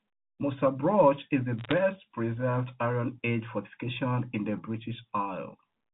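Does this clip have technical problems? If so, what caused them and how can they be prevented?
Yes. Between 1.59 and 1.73 s, bit errors on a digital phone line corrupted a small fraction of the transmitted bits, roughly one in five hundred. On the G.711 A-law path, where every 8-bit code stands for one sample, each flipped bit turns a single sample wrong. Errors landing on the upper bits, or on the sign of a loud sample, throw that sample far off, producing sharp ticks and a brief crackle over the speech. The telephone coding itself limits the sound to below 4 kHz and adds only faint quantisation noise. Prevention: protect the digital link with error detection and correction or a cleaner transmission path.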